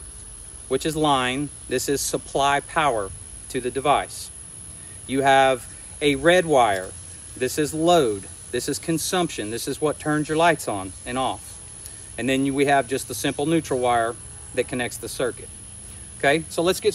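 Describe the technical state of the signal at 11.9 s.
At 11.9 s the signal is intact, with no dropout, clipping, glitch or other technical fault audible at that point.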